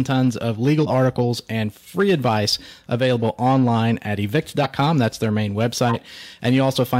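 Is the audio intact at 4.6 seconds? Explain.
No. From 4.62 to 4.67 s, compressed frames are skipped. The decoder drops whole frames, either missing or rejected as damaged, so the speech jumps ahead by around 50 ms.

Hard clipping is also present at this point and throughout the clip. The signal runs about 4 dB past what one stage can pass, so a small fraction of peaks are sliced flat. The added high harmonics give a crackle on the loudest syllables.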